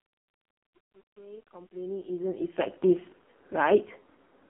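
Speech heard through an AMR narrowband mobile codec for its whole length: nothing passes above 3.8 kHz, and the voice turns buzzy and synthetic, which fits the low bitrate of about 5 kbps. Simple telephone band-limiting would sound dull but natural, not this heavily damaged.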